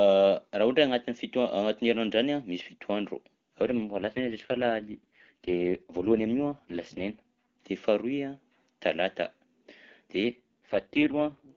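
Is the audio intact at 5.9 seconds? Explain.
No. An AMR rate drop runs from 3.64 to 7.42 s, before "de faharoy". The codec falls to a lower rate, consistent with about 6.6 kbit/s, so speech turns rough and synthetic without losing band or continuity.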